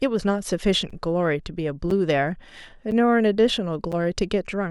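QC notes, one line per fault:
0.90, 1.91, 2.91, 3.92 s: gap between chunks, about 7 ms holes once per second at each 1.0 s chunk join, interrupting the speech.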